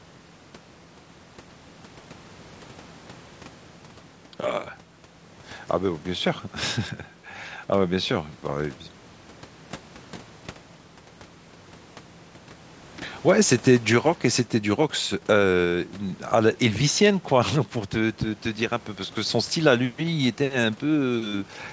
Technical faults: none

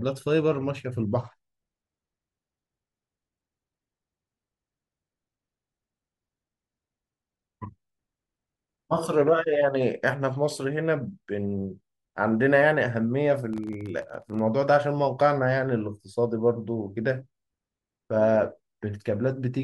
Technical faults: processor overload crackle

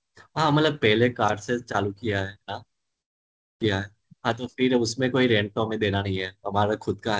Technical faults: long network dropout; jitter buffer speed-up

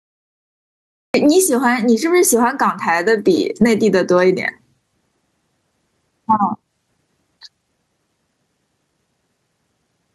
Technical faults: gain pumping; cut-off start

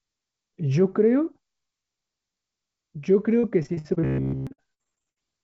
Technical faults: repeated packet loss (robotic sound); robotic sound from repeated short buffers

